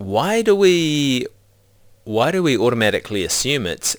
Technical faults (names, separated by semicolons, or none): crude rate conversion